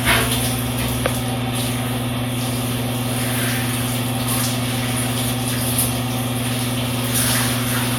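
No technical faults can be heard anywhere in these everyday sounds. Nothing in the audio points to a problem with how it was captured, processed or passed along.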